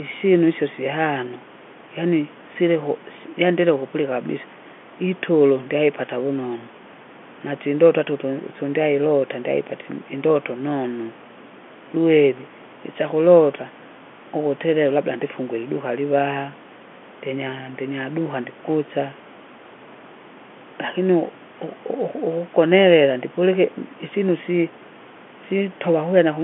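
No technical fault can be heard in this speech: it sits in an ordinary G.711 telephone band with nothing above about 3.7 kHz, and the room noise stays about 22 dB below the voice.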